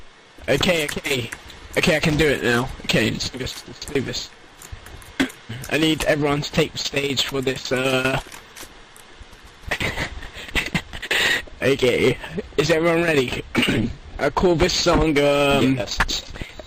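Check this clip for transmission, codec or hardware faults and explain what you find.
Nothing here sounds like a transmission, codec or hardware problem; there's no fault to report.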